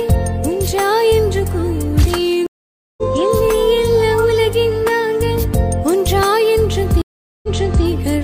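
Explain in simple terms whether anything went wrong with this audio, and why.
A stream reconnect happens twice, at 2.47 to 3.03 s and at 7.02 to 7.85 s. Each time the connection dropped, the player went silent for about half a second the first time and about 0.4 s the second, then reconnected and restarted mid-stream. The first restart skips roughly half a second ahead. The second replays 0.42 s that was already heard.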